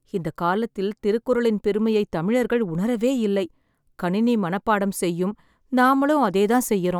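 No technical faults are audible anywhere in the speech recording.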